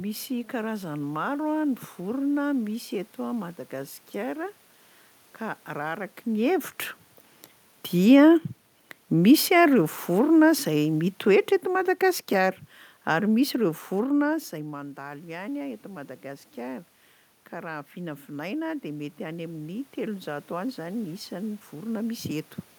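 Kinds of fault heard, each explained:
Automatic gain falling: from 9.11 to 14.36 s the level sinks by about 6 dB, voice and room noise dropping together, a waveform envelope tapering steadily.
Automatic gain rising: after the input drops about 13 dB, gain climbs about 3 dB (14.53–16.93 s) then about 5 dB (17.52–22.31 s), lifting voice and background together, the spectrogram brightening gradually.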